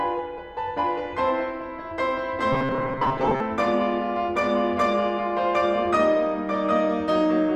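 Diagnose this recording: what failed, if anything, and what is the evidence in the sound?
Robotic sound from repeated short buffers, 2.53 to 3.40 s: the music becomes a rigid 133 Hz buzz, likely from driver-buffer starvation looping 7.5 ms chunks, with about half the audio repeated.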